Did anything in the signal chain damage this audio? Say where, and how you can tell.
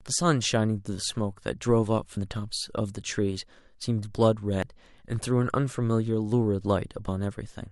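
Yes. Audio missing between chunks at 2.17, 4.62 and 7.08 s: roughly 40 ms skips repeating every 2.5 s, likely a buffer-stage recorder losing audio at chunk boundaries.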